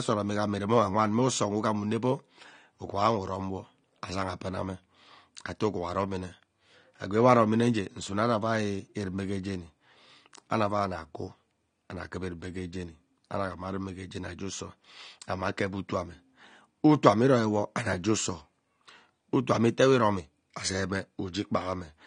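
Throughout, the speech sounds dull and smeared, with nothing above 9.7 kHz. Likely AAC compression at a low bitrate, perhaps near 32 kbps, with plainly audible codec damage.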